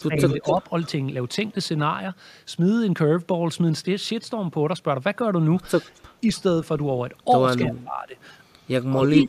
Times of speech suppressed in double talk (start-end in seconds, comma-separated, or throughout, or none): 0.00-0.69, 7.66-8.19, 8.97-9.29